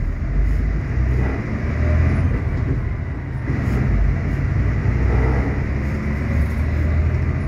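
Nothing goes wrong anywhere in this one, so there's no fault to point to.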